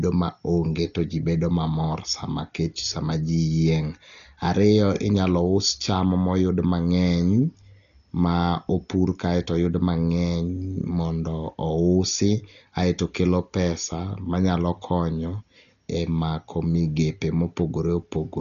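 Throughout, the speech stops at 7.1 kHz, a flat spectrogram ceiling, with rough fluttering noise on tones. This is likely heavy Dolby Digital compression, fitting roughly 40 kbps.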